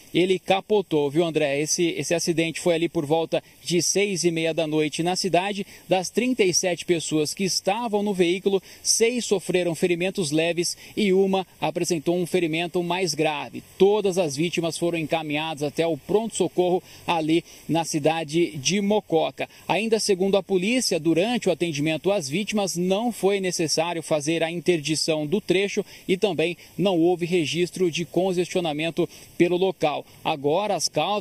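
Channel delay (comb filtering) runs from start to end. One channel arrives late by a fraction of a millisecond, roughly 0.4 ms. When the two channels fold to mono, their shared content cancels at evenly spaced frequencies. The first notch sits around 1.5 kHz, with further notches repeating above it. The sound is hollow and phasey. The notches stay fixed, so the coloration never changes.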